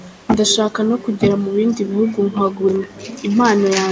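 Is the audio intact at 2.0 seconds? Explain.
No. An echo leak runs from 1.92 to 2.33 s: a faint, delayed copy of the speech trails the talker by about 318 ms, sitting very low beneath the direct sound. The likely cause is a far end playing the call over a loudspeaker, where the echo canceller failed to fully subtract what its microphone picked up and passed that residue back. The brief ghostly repeat is what breaks the clean signal at this moment.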